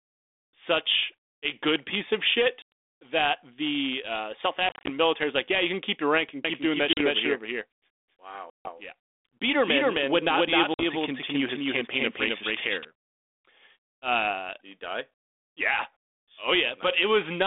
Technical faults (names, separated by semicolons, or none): packet loss on an ADPCM call; doubled audio track